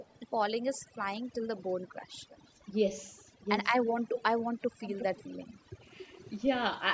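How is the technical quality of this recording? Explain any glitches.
The recording has two clear faults: heavy-handed noise suppression throughout, and recurring echo leak.

Overdone noise removal runs through the whole clip. The noise reduction was set too aggressively, so any frequency band close to its noise estimate gets pushed far down or cut out, and the quieter parts of the speech go with it. The background drops to near silence speckled with twinkling artefacts, and the voice has nothing above 8 kHz, as expected from call microphone processing.

Echo leak appears at 0.0–0.2 s, 0.73–0.8 s, 2.29–2.6 s, 3.03–3.18 s, 4.14–4.23 s and 4.81–5.23 s. A delayed copy of the speech trails the original by about 0.34 s, drifting slightly from 338 to 345 ms. Most likely, one party was on a loudspeaker and its echo canceller let some of the pickup through. The copies are mostly faint, around 20 to 40 dB down, but the last two are much stronger, roughly 5 to 10 dB below the speech.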